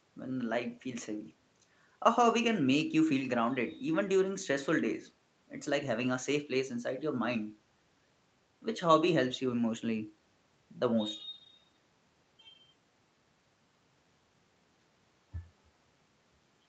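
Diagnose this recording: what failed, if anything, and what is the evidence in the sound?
Nothing here has failed: the speech has simply come through an ordinary call chain, with the microphone processing trimming the deepest bass and the codec capping the top end at about 8 kHz, which is just how a normal call sounds.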